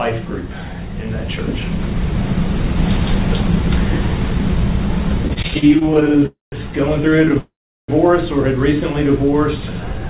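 From 5.28 to 6.26 s there are repeated stalls (stutter). Packets arrived late and the jitter buffer kept running dry. Over twenty tiny gaps were filled by stretching the last sound, the longest 33 ms. About 0.3 s was added. The audio drags and judders.

At 6.26 s a call audio freeze follows, lasting until 6.54 s. The last sound smears into a brief fading buzz, then about 0.16 s of silence. The likely cause is packets held up in transit. Nothing is lost; the audio resumes where it stopped.

From 7.10 to 7.37 s the stutter returns. Nine short gaps, none longer than 13 ms, make it judder again.

At 7.39 s a second freeze runs to 7.90 s. It is a longer hold, about 0.49 s, mostly silence.

From 8.81 to 10.06 s comes a jitter buffer slow-down. The receiver repeated single pitch periods or bits of pauses to rebuild its reserve, adding 108 ms. Playback runs at 92 percent speed with unchanged pitch. 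Sounds are drawn out. Throughout, nothing is heard above 4 kHz, which fits a G.711 call path.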